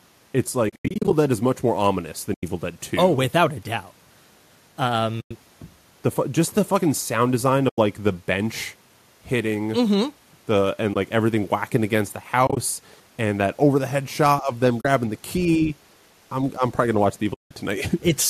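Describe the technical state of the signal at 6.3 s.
At 6.3 s the speech is intact, with no fault present; the light coding it carries, likely low-delay AAC, sounds normal there.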